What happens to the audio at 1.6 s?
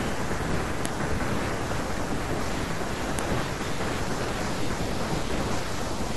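Nothing goes wrong at 1.6 s; the speech there plays through intact, with no dropout, click, distortion or other fault.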